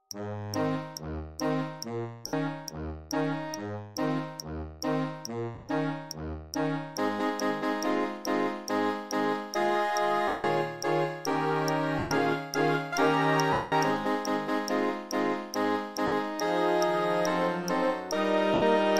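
Lost LE Audio frames occur at 2.27 s (60 ms), 5.55 to 5.69 s (scattered), 10.28 s (160 ms), 11.99 s (120 ms), 13.53 s (190 ms), 16.07 s (50 ms) and 18.54 s (80 ms). The LC3 decoder repeats the last spectrum with random signs, so tones smear into noise that fades on the longer gaps. A plain dropout would cut to instant silence instead.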